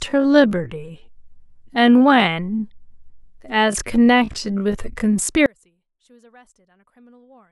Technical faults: time-stretched section; one channel inverted

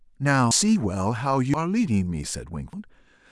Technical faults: dropped buffer (overrun)

